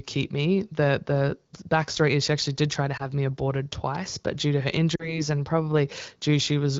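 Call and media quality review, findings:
Lost AMR speech frames: radio errors fail frame checksums, and the AMR-WB decoder conceals by reusing the last pitch and vocal tract settings at falling gain. A brief warble at 2.97–3.02 s, between "actually did try to" and "me aborted twice but", fits one lost 20 ms frame. At 4.96–5.21 s, after "but due to her", the sound drops to near silence, which fits about 40 ms lost, then returns rough.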